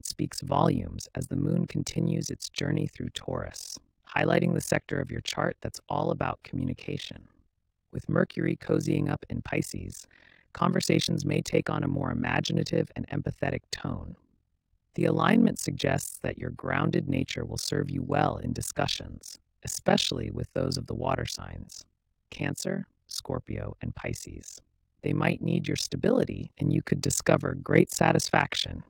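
The speech carries a harsh, robotic flutter from start to finish, the level dipping by about 60 dB around 40 times a second. This is overlap-add ripple: the windowed frames were recombined with an overlap whose gains never sum evenly, so loudness pulses once per frame.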